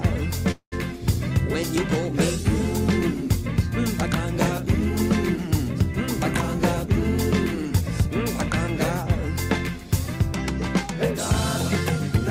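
Packets were likely held up, draining the jitter buffer: a call audio freeze from 0.51 to 0.74 s. The last sound stretches into a fading buzz or hiss ending in 80 ms of silence. Playback then resumes where it stopped, with nothing lost but everything afterward 204 ms late.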